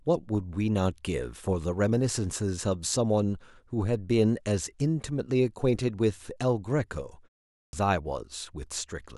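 At 7.62 s, after a 0.42 s pause, a clipped start after a pause cuts off about 0.11 s of speech. The waveform jumps abruptly from flat silence, missing its onset energy.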